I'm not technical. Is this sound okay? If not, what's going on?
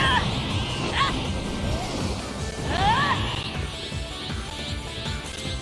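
Yes, nothing stood out as a problem when listening to this sound.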